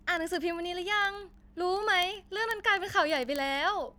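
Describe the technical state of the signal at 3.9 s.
At 3.9 s the signal carries word clock ticks, running from 0.11 to 3.97 s: sharp, uneven clicks at a steady rate of roughly one every 30 ms. The receiving clock drifts about 700 ppm from the sender's, so one sample slips each time. Unlike dropouts, nothing goes silent.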